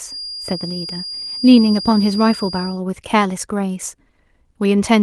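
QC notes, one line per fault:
0.0–2.82 s, feedback whistle: a thin, steady tone at 4.8 kHz sits well below the speech, wavering a little in level before stopping. It's likely a speaker-to-mic loop hovering right at the edge of feedback, ringing on one frequency without running away.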